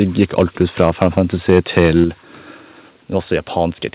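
From 0.02 to 1.19 s and again from 1.49 to 2.04 s, the peaks show microphone overload, most likely an input level set too high for the converter. The loudest parts run about 5 dB and then about 6 dB past the converter's limit, so their tops are sliced flat. Around one percent of the samples are clipped in the first stretch and a few percent in the second, giving a harsh, crackling edge to the strongest syllables.

At 2.04 s, right as the second distorted stretch ends, the level falls in a single step of about 5 dB. This is likely the microphone volume being stepped down automatically in response to the clipping. The sound and its background both turn abruptly quieter, and the narrowband call path, with nothing above 4 kHz, carries the change.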